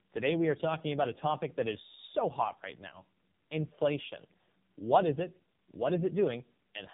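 Tandem speech coding throughout: the speech is roughened and smeared, with nothing above 3.7 kHz, which fits two low-rate AMR-NB encodings with a G.711 link between them.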